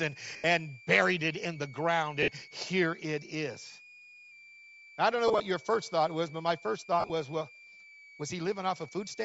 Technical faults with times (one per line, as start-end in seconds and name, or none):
0.00-9.24 switching supply whistle
0.00-9.24 Bluetooth LC3 compression
0.34-0.44 lost LE Audio frames
2.23-2.28 lost LE Audio frames
5.28-5.40 lost LE Audio frames
7.00-7.10 lost LE Audio frames